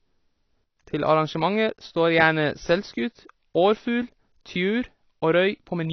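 AAC compression runs through the whole clip, with nothing above 6 kHz. The speech sounds dull and smeared, with a plainly audible watery, fizzy texture on sustained sounds and sibilants. This likely comes from AAC-LC coding at a low rate, about 24 kbps, where the encoder discards the upper band and quantises the rest coarsely.

A sudden gain jump comes at 0.64 s. The level drops by about 8 dB in a single step and stays there until 0.77 s. The speech and the background noise fall together, which points to a digital gain change applied without a ramp as the likely cause.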